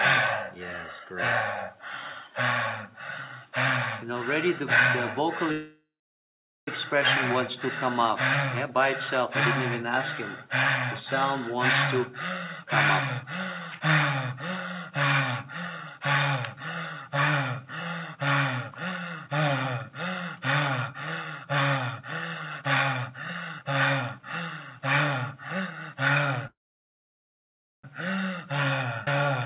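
The audio has the narrowband sound of a call path, with nothing above 4 kHz, which fits the G.711 A-law codec. Two call audio freezes occur, at 5.52–6.68 s and 26.47–27.84 s. Each is most likely a packet delay that ran the jitter buffer empty. The last sound trails off into silence, lasting 0.8 s and 1.29 s, and then resumes where it stopped, so the pauses add time without losing any sound. A jitter buffer speed-up runs from 11.96 to 14.92 s at 103% and from 15.97 to 25.96 s at 104%. Short pitch-period slices are trimmed repeatedly, removing roughly a tenth of a second and then roughly 0.4 s. The pace runs slightly faster while the pitch stays put, unlike a sped-up recording. A skip ahead at 29.05–29.08 s drops roughly 0.7 s and joins the two sides almost directly with only a small gap, which separates it from the freezes.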